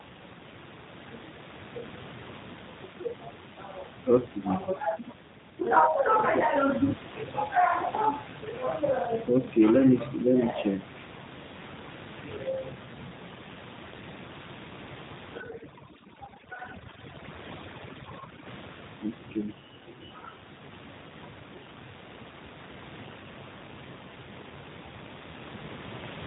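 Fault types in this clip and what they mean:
G.729 codec: speech sounds rough, buzzy and synthetic with nothing above 3.8 kHz, which fits an 8 kbit/s codec rebuilding the voice from a filter and pulses.
overdone noise removal: from 15.41 to 18.46 s the room noise drops and breaks up into twinkling specks, because noise reduction set too strong switches off whole bands.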